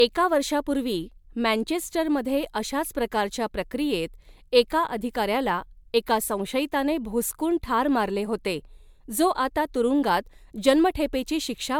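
Speech with generation loss throughout: a swirly, hollow smear and blurred attacks, likely from around four MP3 re-encodes, consistent with roughly 140 kbit/s each.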